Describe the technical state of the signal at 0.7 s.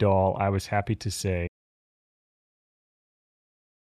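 At 0.7 s the speech signal is intact, with no audible fault.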